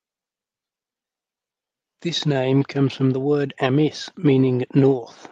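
Clock drift between sender and receiver runs through the whole speech clip. The sender's clock is roughly 4% slow, so the receiver's jitter buffer keeps draining. On a waveform, segment lengths look faintly stretched, and duplicated slivers appear at uneven spacing.

From 0.33 s to 4.83 s, repeated timing corrections compensate for that drift. The receiver repeats short pieces, adding something like 150 ms in total, so pacing sits at 97% speed. A spectrogram shows tiny duplicated frames and small seams at irregular intervals.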